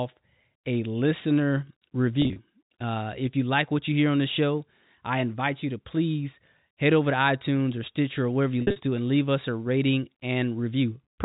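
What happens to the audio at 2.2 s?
Packet loss with pitch repetition from 2.22 to 2.36 s: about 90 ms of gaps, each bridged by repeating the last pitch period, giving brief held, buzzy stutters.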